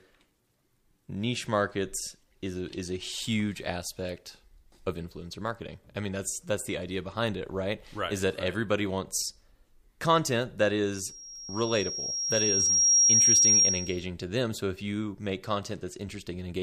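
Loudspeaker feedback squeal runs from 10.94 s to 14.06 s. The microphone is picking up the loudspeaker it drives, and at 5.6 kHz the round trip returns more signal than it sent, so that frequency keeps feeding itself. It is heard as a thin, piercing tone that climbs over about two seconds until it sits roughly 10 dB above the speech, then holds as a steady squeal until 14.06 s.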